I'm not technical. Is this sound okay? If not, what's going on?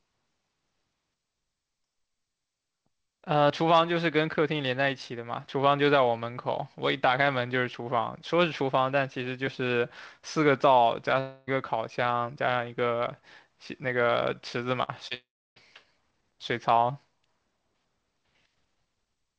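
No, there are a few glitches in this speech clip.

At 3.50 s and again at 13.84 s you get a little jump in the sound. That's most likely a dropped buffer (overrun): the computer didn't grab a chunk of audio in time, so roughly a fiftieth of a second got skipped and the two sides were stitched together.

From 11.20 to 11.49 s, and again from 15.14 to 15.58 s, the sound turns into a fading buzz or hiss and then picks up further along. That's likely a long network dropout, where the audio stopped arriving and the receiver stretched out the last bit to cover. The second one is longer and goes properly quiet for about a third of a second before the sound comes back.

Between 14.83 and 14.90 s there's a shorter version of the same thing, a burst of packet loss. A few pieces of the call went missing or arrived too late, so the last sound gets held and faded for a moment, and the audio resumes a bit further on with that piece missing.

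Right after that, from 15.08 to 15.12 s, there's a tiny smear or wobble. That's short concealed packet loss: a few hundredths of a second never arrived, and the receiver quietly patched the hole by continuing the sound and blending back in.

The call codec trims everything above 8 kHz, so the sound comes across a little muffled, like a phone call.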